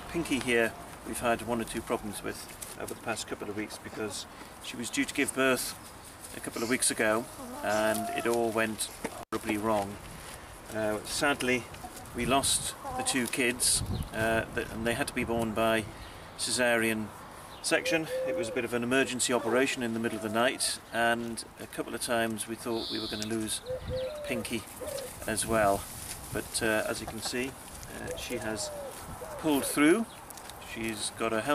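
At about 9.19 s there's an intermittent contact fault, the kind you get when a loose cable or plug briefly lets go. The whole disturbance runs to roughly 9.37 s, and inside it the signal drops out for about 93 ms. You hear a crackle as the connection breaks and again as it reconnects. In the gap, the sound vanishes and only a faint hiss remains until the contact closes again.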